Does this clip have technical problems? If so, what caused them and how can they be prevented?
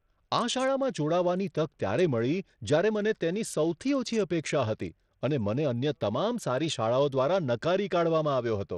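Yes. Throughout the speech, a likely Bluetooth SBC compression link ran starved of bits, which fits a rate near 80 kbps. The upper sub-bands got too few bits, so the treble flickers and drops out, and coarse quantising leaves a gritty, aliased haze over the voice. To prevent it, raise the SBC bit pool, use a better Bluetooth codec, or record over a wired connection.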